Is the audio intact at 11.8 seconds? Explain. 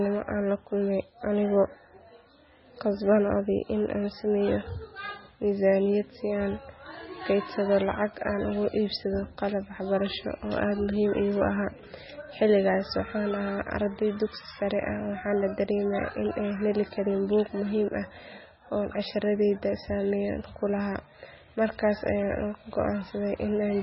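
No. At 11.8 seconds, as throughout the speech, the audio shows what is likely heavy MP3 compression, starved of bits in a way that fits a rate near 16 kbps. Everything above 5.6 kHz is cut, and weak frequency lines flicker on and off, giving a watery, swirling sound with smeared attacks.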